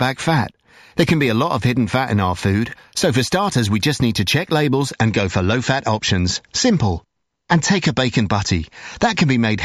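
From 0 to 4.92 s, imaging from linear upsampling: straight-line interpolation dulls the top and mirrors the band into 8–16 kHz, a metallic shimmer on sibilants rather than aliasing's downward-folded tones.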